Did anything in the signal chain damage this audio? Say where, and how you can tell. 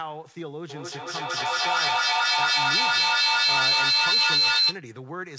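Yes. Feedback howl from 0.7 to 4.84 s: an acoustic loop between call devices gains each pass, peaking about 13 dB above speech. A spectrogram shows a bright line near 4 kHz pulsing roughly five times a second.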